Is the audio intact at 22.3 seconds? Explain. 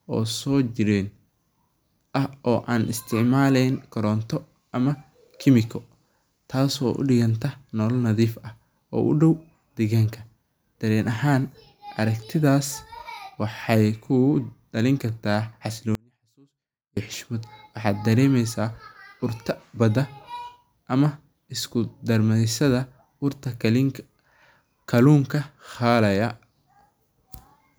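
Yes, the speech at 22.3 seconds plays through intact, with no dropout, click, distortion or other audible fault at that moment.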